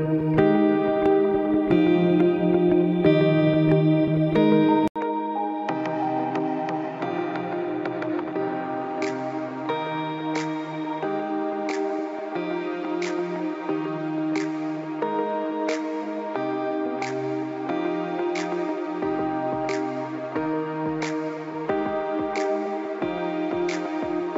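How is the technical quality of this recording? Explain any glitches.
The quality drops partway through. At 4.88 s the input was likely switched to a poorer device: after an 80 ms gap, nothing above 7.6 kHz passes, so the sound turns duller and boxier, the level falls noticeably, and a faint new background noise stays until the end.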